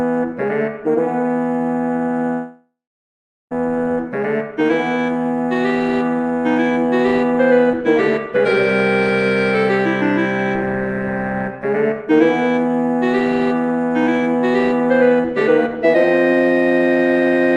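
From 2.33 to 3.53 s, a long network dropout likely cut off the incoming stream for 1.18 s. The receiver stretched the last sound into a fading buzz, then left 0.77 s of near silence before the audio resumed with that stretch missing.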